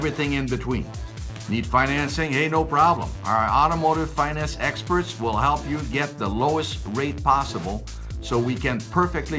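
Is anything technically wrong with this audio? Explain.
No, nothing is technically wrong: the audio has come through a call path whose band stops at 8 kHz, which fits a wideband codec such as G.722, and that limit is simply how the path works.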